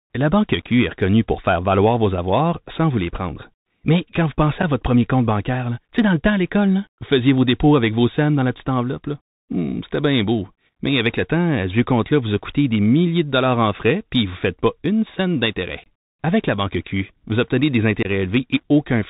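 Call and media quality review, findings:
Bluetooth CVSD headset codec, whole clip. Speech band stops dead around 4 kHz, so it sounds boxy and narrow. Granular hiss sits under everything, s sounds come out scratchy, and louder bright bits smear where the delta step can't keep up. Plainly audible damage, consistent with a 64 kbps CVSD headset link doing its one-bit up/down tracking.

Unconcealed Bluetooth headset packet loss, three spots. 4.62 s: tiny dropout, about 7.5 ms gone, roughly one packet. 15.84–15.88 s and 18.03–18.06 s: longer holes, about 22.5 ms each, around three packets, hard-edged gaps and a brief quieter recovery after. Nothing fills the missing audio, just silence or an idle pattern patched in.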